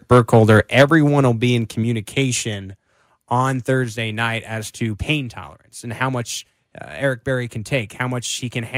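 Right from 0.11 s through about 0.95 s the speech has a harsh, crackly edge on the loudest syllables, with the peaks sounding flattened and gritty. That's microphone overload, most likely an input set too hot, so the peaks slam into the converter's ceiling, by about 6 dB, and get their tops sheared off. Only a few percent of the samples end up clipped, but that's plenty to make those louder moments sound brittle and distorted.

Then the level starts dropping in abrupt steps, taking the voice and the background down together. The first comes at 0.82 s, just before the overload ends, and is about 4 dB. A bigger one, about 6 dB, follows at 1.83 s, and a smaller one of about 3 dB lands at 3.84 s. That pattern points to the microphone volume being stepped down, likely by the call software reacting to the overly hot, clipping input and pulling the device gain back one notch at a time.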